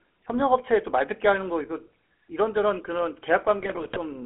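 From start to finish the speech carries the GSM full-rate codec sound. It fits a 13 kbps stream. The band runs only from 250 Hz to 3.4 kHz. The codec rebuilds speech from sparse pulses through a vocal-tract filter, so the tone is plainly buzzy and gravelly.

From 3.59 to 3.99 s, GSM bit errors take over. Corrupted filter, pitch and gain values reach the decoder, frame after frame. The speech breaks into squawks, pops and gargling. The density points to roughly a 2 percent error rate.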